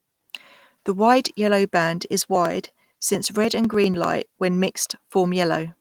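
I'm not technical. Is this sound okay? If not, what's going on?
No. From 2.26 to 4.04 s, right after "wide yellow band", there are periodic USB or driver dropouts. Something else running on the computer keeps briefly blocking the connection to the audio hardware, about ten times a second, and each time roughly a millisecond of sound is skipped entirely. Those tiny gaps come out as a steady run of around twenty small ticks laid over the speech, heard only while someone is talking.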